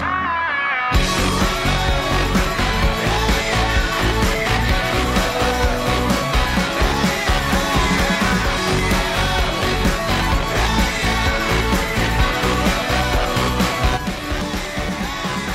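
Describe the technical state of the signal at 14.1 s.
At 14.1 s the signal sits inside a sudden gain jump that begins at 13.97 s and runs to the end at 15.54 s. The level drops by about 6 dB in a single step, with no ramp. Sound and background noise fall together. A digital gain change applied instantly is the likely cause.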